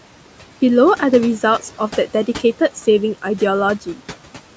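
Throughout the clip, noise suppressor artifacts shape the background: the room noise, sitting about 19 dB below the speech, is pulled down by about 12 dB in the pauses and then swells back under each phrase as the suppressor lets the bands go. Unlike a noise gate, which shuts the whole signal off between phrases, this is a band-by-band reduction, so a thinned residue of noise stays audible rather than dropping to silence.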